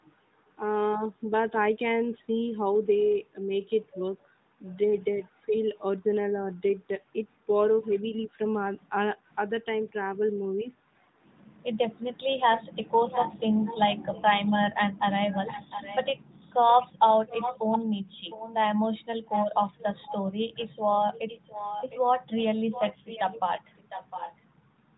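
A speech recording carried over an AMR narrowband mobile link, with a likely echo leak from a far-end loudspeaker whose echo canceller let some of the returned signal through. A delayed copy of the speech trails the original by about 0.71 s. It first appears as a faint scrap from 4.71 to 4.77 s, about 35 dB below the speech. It then becomes a sustained echo from 12.52 to 21.98 s and again from 22.72 to 24.35 s, at about 10 dB below the direct speech. Between 5.47 and 5.53 s there is speech suppressed in double talk, likely caused by the echo canceller failing to tell local talk from loudspeaker echo while both sides overlapped. The speech level dips by roughly 10 dB for a brief stretch of about 70 ms.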